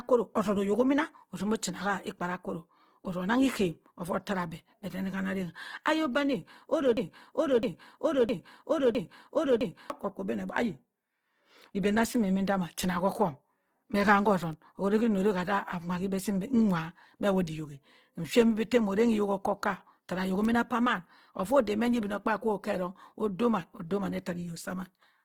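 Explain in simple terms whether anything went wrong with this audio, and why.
Throughout the clip the speech sounds rough and grainy, with a noisy, gritty texture on sustained sounds instead of clean tone. That points to heavy Opus compression, likely squeezed into a small data budget. In its music mode the encoder keeps the overall energy of each frequency region, but when it runs short of data it fills the detail with borrowed or noisy content. That is where the harshness comes from.

From 6.97 s to 9.9 s there is a broken-record loop. A fragment of about 0.66 s of speech plays four times in a row, identically each time, as if the audio got stuck. This likely happened because the playback or streaming chain stalled and kept re-sending the last piece it had buffered. The speech that should have been heard during those seconds is lost.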